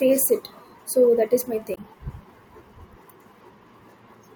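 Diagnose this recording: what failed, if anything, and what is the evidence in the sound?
A brief glitch cuts through the speech from 1.72 to 1.78 s, right after "is my", lasting about 64 ms. The failure is in the codec stage: damaged data in a compressed stream. A short run of the compressed file or stream was corrupted, so the decoder misread or rejected the frames covering that stretch, lost frame sync, and produced a glitch until it found a valid frame header and resumed normal decoding.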